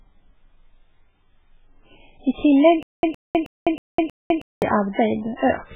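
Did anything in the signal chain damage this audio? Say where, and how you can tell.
Yes. MP3 compression runs throughout at the codec stage: nothing above 3.8 kHz and a heavy watery swirl, which fits a very low bitrate, likely near 8 kbps.

Stutter with silent gaps from 2.83 to 4.62 s: a 113 ms fragment repeats five times every 318 ms, with 204 ms of digital silence between, likely from a stalled playback buffer.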